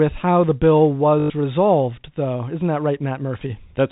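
Right after "how the bill", from 1.2 to 1.3 s, there's packet loss with the last packet repeated. About 100 ms went missing, which fits five 20 ms packets, and the receiver looped the previous chunk, giving a robotic 50 Hz stutter before "resolved though". The G.711 telephone coding keeps everything above 4 kHz out.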